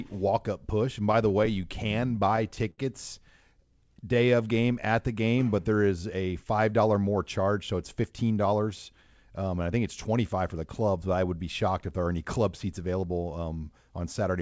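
From 1.12 to 2.80 s the speech catches and drags in ten short hitches, each a brief held or smeared continuation of the sound just before it, the longest about 74 ms. These are repeated stalls (stutter). Packets reached the receiver late, so its jitter buffer kept running dry, and each time it stretched out the last sound until fresh audio arrived. Together the fills add about 157 ms, roughly 9% of that stretch, and nothing is actually lost.

Between 3.80 and 5.30 s, just before "but there is a", the speech slows to about 94% of its pace while keeping the same pitch, with sounds drawn out. This is a jitter buffer slow-down. With its reserve running low, the receiver repeated single pitch periods and slivers of pauses over and over. That stretched the passage by about 93 ms and built the buffer back up.

From 7.41 to 8.67 s, right after "a five dollar more", the speech turns hurried and runs about 10% fast at an unchanged pitch. 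This is a jitter buffer speed-up. The buffer was holding more audio than it aimed for, so the receiver cut short pieces of one or a few pitch periods again and again, trimming around 150 ms in total to bring the delay down. Throughout, the call path cuts off everything above 8 kHz, which fits a wideband call codec such as G.722.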